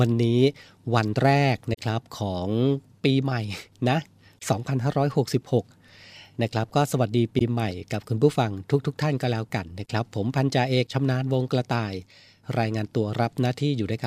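At 1.73 to 1.79 s the speech drops into a short, soft-edged hole, and at 7.39 to 7.42 s it briefly dips. That's AAC frame loss with muting: the decoder zeroed the missing spectrum, fading out and back in over about a frame, with about 43 ms lost, then about 21 ms, which fits two lost frames, then one.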